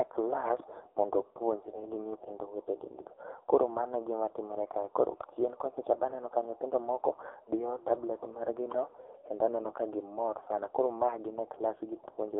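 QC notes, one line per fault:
Throughout, AMR narrowband mobile codec: the speech has been squeezed through a mobile-phone speech coder, leaving a thin band from about 300 Hz to 3.5 kHz with nothing above. Heavy damage makes the voice buzzy and synthetic, which points to one of the codec's lowest modes, near 6 kbps, where few pulses drive the vocal-tract model. A spectrogram shows a hard ceiling at 3.5 kHz, an empty low band, and smeared, blocky harmonics.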